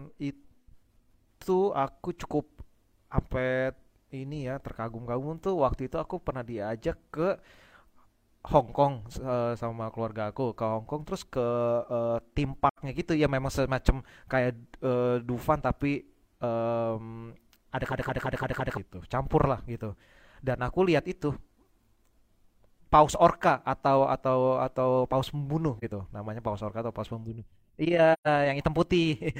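At 12.68 s the decoder lost AAC data and zeroed the missing spectrum. This AAC frame loss with muting leaves a gap of about 85 ms, which fits two lost frames. Because the overlapping transform windows fade the sound out and back in, the hole has soft edges.

From 17.92 to 18.77 s the system stalled while the audio hardware kept replaying one section of its ring buffer. This is a system hang loop. A 170 ms slice repeats five times at about 5.9 Hz, a length that fits an 8192-sample buffer. It comes across as a rapid machine-gun stutter, and roughly a second of the real audio never plays.

The same AAC frame loss with muting returns at 25.78 s, a brief 43 ms dip consistent with a single frame. At 28.13 s there is a longer 128 ms hole matching three frames. Both fade out and in smoothly.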